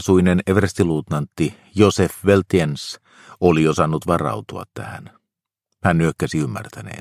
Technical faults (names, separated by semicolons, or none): none